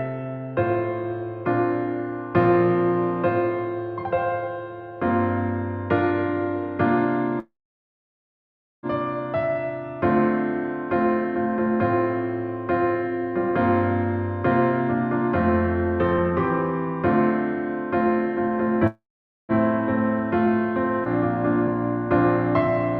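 Call audio freeze, 7.39 to 8.86 s and again 18.87 to 19.52 s: the sound stalls, and the likely cause is packets held up in transit so the jitter buffer ran dry. Each time, a short fading continuation of the last sound gives way to silence, about 1.31 s in the first and 0.47 s in the second. The audio then resumes where it stopped, with nothing lost, but playback now runs 1.44 s and then a further 0.62 s behind.

Skip ahead, 21.04 to 21.08 s: playback jumps forward, dropping roughly 0.4 s of audio. That stretch was discarded, whether in transit or by the jitter buffer overflowing while later audio was already queued. Only a 15 ms join bridges the two sides, so there is almost no audible gap, just an abrupt splice where material is missing. The jump also recovers part of the lag built up by the earlier freezes.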